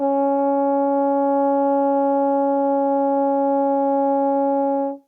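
No technical faults are audible in this music.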